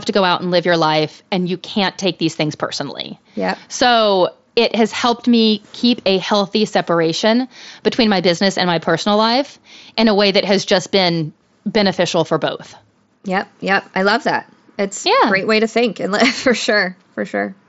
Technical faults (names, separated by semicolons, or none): none